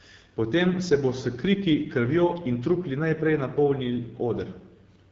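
From start to end, the speech carries plainly audible AMR wideband (HD Voice) codec damage. The roughness and rasp suggest a low rate near 8.85 kbit/s. Nothing sounds above 7.5 kHz.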